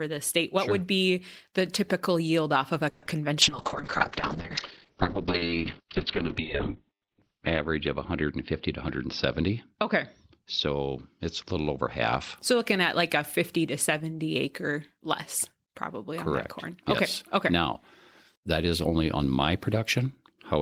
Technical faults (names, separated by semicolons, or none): call audio freeze; short concealed packet loss; call bitrate drop; jitter buffer speed-up